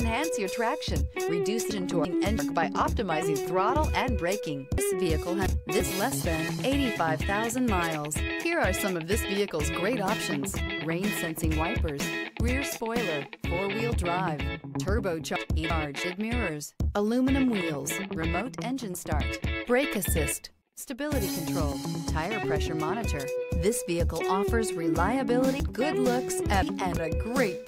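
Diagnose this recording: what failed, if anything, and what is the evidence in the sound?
Chunks out of order, likely at the buffer stage: 341 ms blocks play one to three slots late at 1.71–2.39, 4.78–5.80, 15.36–16.04 and 25.6–26.97 s, causing jumbled joins.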